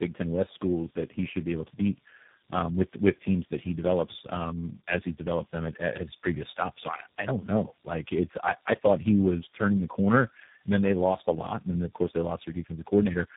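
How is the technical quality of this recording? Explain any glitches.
Quality's pretty rough: the speech is muffled, grainy and warbly from start to finish, with nothing above about 3.8 kHz. That's tandem speech coding: about three low-rate speech codecs in a row, which fits a chain ending in G.729A, each re-encoding the previous coder's damage.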